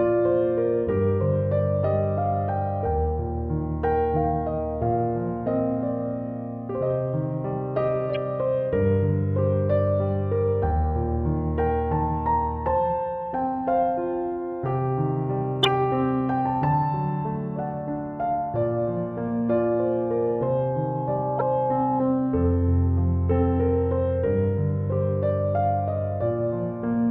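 The audio carries three corrupt frame decoded events, at 8.15 s, from 15.63 to 15.68 s, and from 21.38 to 21.41 s. Each is a brief chirp or noise blip, where damaged compressed data was decoded anyway and energy landed at the wrong frequencies. The first peaks at about -25 dBFS and the later two at about -10 dBFS. Their shortness sets them apart from the squeal. A loudspeaker feedback squeal runs from 19.49 to 22.02 s as a single 845 Hz tone. It swells over roughly two seconds until it sits about level with the program audio, because the microphone-to-speaker loop gain exceeded one at that frequency. Unlike a codec glitch, it holds one steady pitch and grows rather than flickering, and the third blip falls inside it.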